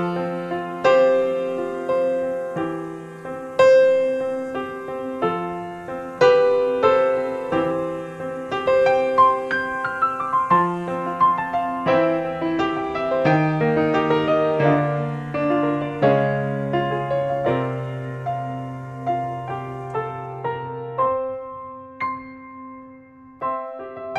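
No technical faults can be heard anywhere in this audio.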